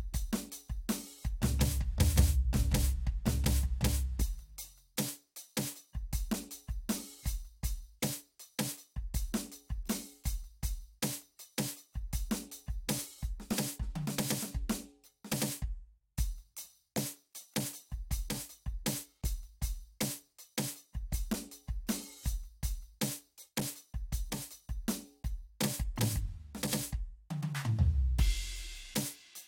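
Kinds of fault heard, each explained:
No faults detected; the music carries no audible defects anywhere in the clip.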